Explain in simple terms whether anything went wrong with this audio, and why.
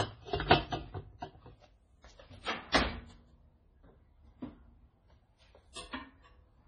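Yes, two things went wrong. The sound is dull and watery throughout, with nothing above about 9.9 kHz. That points to heavy MP3 compression as the likely cause.

There is also pre-echo. Brief hiss appears just before sharp attacks, from 2.72 to 2.74 s and from 5.72 to 5.75 s. The compression smeared its noise backwards in time.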